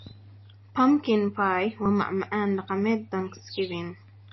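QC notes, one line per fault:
Throughout: MP3 compression. The speech sounds watery and swirly, with s sounds turning metallic and chirpy and the starts of syllables smeared rather than crisp. Nothing is left above 5.8 kHz, so the top end is dull and capped. This is likely heavy MP3 encoding at a low bitrate, around 26 kbps. With too few bits the encoder drops the treble at a fixed cut-off and zeroes quiet frequency lines that flicker on and off between frames.
1.86 s and 2.69 s: dropped buffer (overrun). At each point there is a small jump in the speech, with no gap of silence, as if a sliver of sound was skipped. About 20 ms of audio is missing each time, and the sound on either side is joined directly. The likely cause is the recording program failing to collect its samples before the hardware overwrote them, so that piece of audio was lost.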